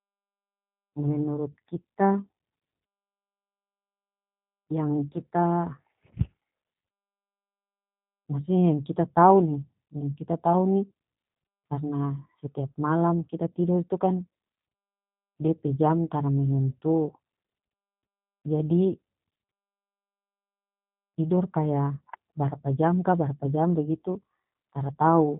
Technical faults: G.729 codec

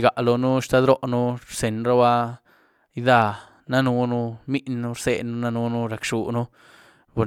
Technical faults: none

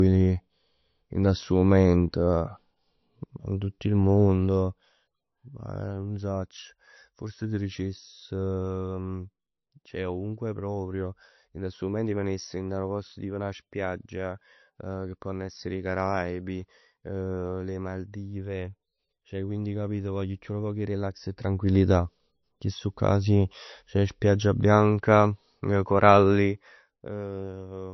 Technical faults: low-bitrate audio saved at a high bitrate

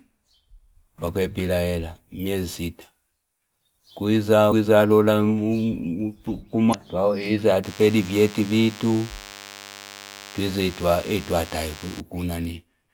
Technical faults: damaged data in a compressed stream; DECT cordless phone buzz

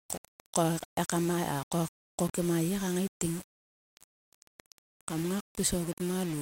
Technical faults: low bit depth without dither

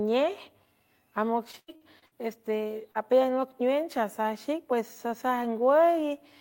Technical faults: repeated packet loss (robotic sound); short concealed packet loss

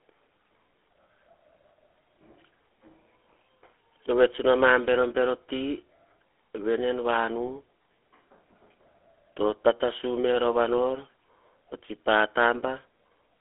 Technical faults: GSM full-rate codec

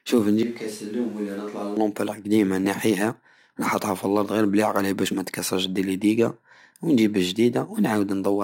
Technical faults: switch to a distant microphone

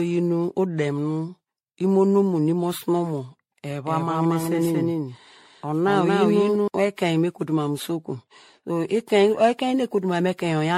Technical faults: generation loss; doubled audio track

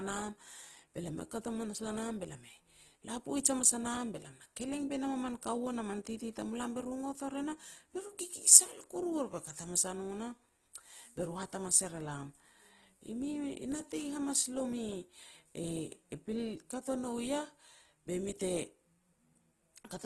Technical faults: Opus compression

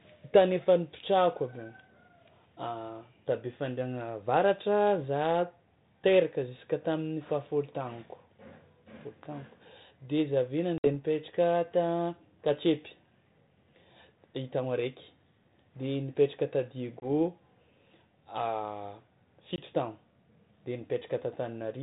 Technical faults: packet loss on an ADPCM call

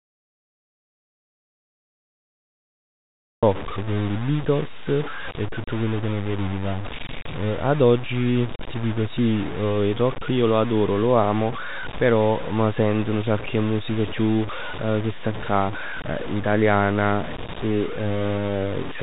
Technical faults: low bit depth without dither; audio dropout to silence

